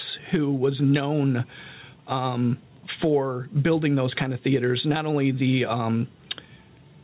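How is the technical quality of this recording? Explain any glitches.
The quality suffers from gain pumping across the whole speech recording. The level keeps breathing, swinging by something like 15 dB as the talker gets loud. That points to input gain set far too hot, with a fast limiter or compressor likely clamping it down on each peak, so loud and quiet stretches end up squashed together. The audio is also band-limited, with nothing above 4 kHz, as expected from a G.711 call codec.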